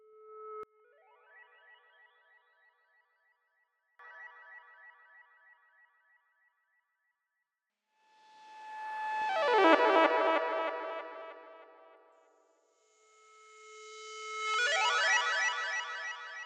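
From 0.63 to 3.99 s the sound suddenly drops away, sitting about 32 dB below where it was, leaving only a faint trace before it snaps back. That collapse is the classic sign of one channel inverted, likely heard through a mono sum: with one side's polarity flipped, everything the two channels share cancels out, and all that survives is the small difference between them.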